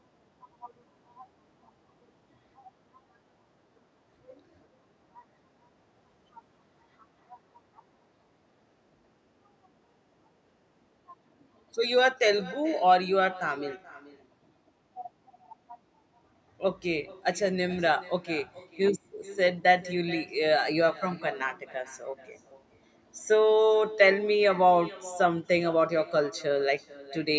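All the way through, there's an echo with no canceller: the far end's loudspeaker feeds their microphone, so the speech returns roughly 0.4 s later, about 19 dB down and thin, over band-limited call audio topping out at 8 kHz.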